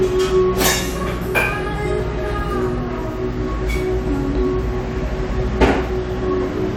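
No technical fault can be heard anywhere in this recording of sounds. There is nothing here that needs a time mark or a note on its cause.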